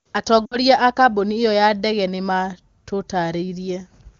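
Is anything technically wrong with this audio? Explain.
Yes. Lost AMR speech frames occur from 0.45 to 0.58 s, just before "a kambuni ĩyo ya". Failed frames forced the wideband decoder to conceal the gap by repeating the last pitch and vocal tract settings at falling gain. About 60 ms is lost, which fits three 20 ms frames. The speech smears, dips in level, then recovers weakly. The surrounding AMR-WB coding sounds consistent with a high wideband rate.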